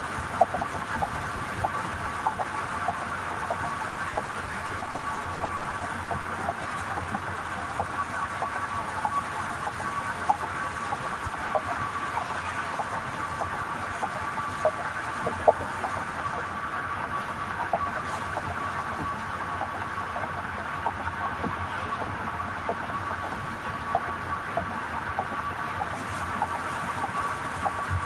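A recording of everyday sound with a stretch of repeated packet loss (robotic sound) from 3.89 to 6.26 s. Over about 2.4 s, 24 gaps occur, none longer than 40 ms. About 560 ms is patched by extending the preceding audio, and about 440 ms is simply lost, leaving choppy fragments with pieces missing. On a spectrogram this shows as short smeared, repeated slices alternating with blank notches. The waveform has a ragged, stuttering envelope with brief dropouts throughout that span.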